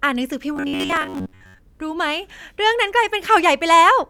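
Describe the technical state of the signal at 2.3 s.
At 2.3 s the speech signal is intact, with no dropout, clipping, glitch or other technical fault.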